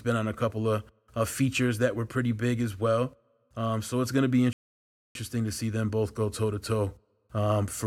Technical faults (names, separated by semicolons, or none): rebuffering stall